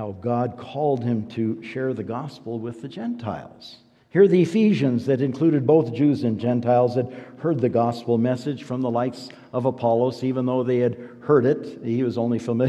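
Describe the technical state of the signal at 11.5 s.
At 11.5 s the signal is intact, with no audible dropout, clipping, distortion or other fault.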